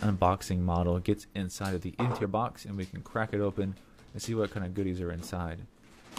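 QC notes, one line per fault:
1.19 s to end, one channel drops out: one stereo channel is likely lost, so after the mono sum the shared content falls abruptly by about 6 dB and stays down.
2.19–2.23 s, damaged data in a compressed stream: corrupted frames make the decoder misread them and lose sync while hunting for the next frame header, producing a brief 44 ms glitch.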